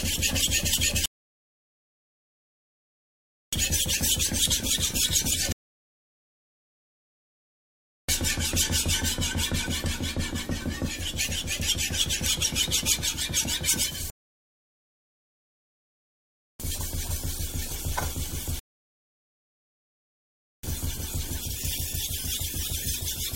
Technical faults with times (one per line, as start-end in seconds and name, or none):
1.06-3.53 rebuffering stall
5.52-8.09 rebuffering stall
14.10-16.60 rebuffering stall
18.59-20.63 rebuffering stall